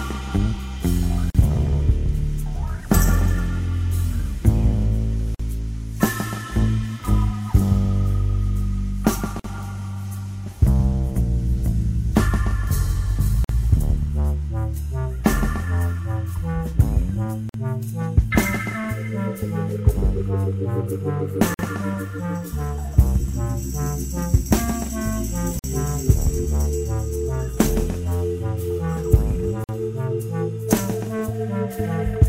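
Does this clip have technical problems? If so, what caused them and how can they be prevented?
Yes: short silences of 43 ms at first, then 49 ms, cut the sound every 4 s, at 1.30, 5.35, 9.40, 13.44, 17.49, 21.54, 25.59 and 29.64 s. This is a gap at a join of encoded pieces, where each separately encoded segment kept its encoder start-up delay and final-frame padding. Prevent it by encoding the audio in one pass, or by trimming each piece's delay and padding before joining.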